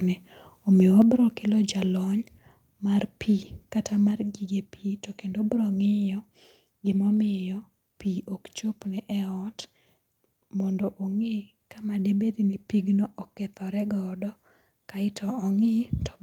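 At 1.02 s the whole signal, voice and background alike, drops by about 6 dB in a single step, and at 4.11 s it drops again by about 2 dB. Both steps are instant and the level stays down. This is likely a microphone volume stepped down by the call software lowering the input gain. Unlike a gradual fade or noise-suppression ducking, the background falls with the voice and never recovers.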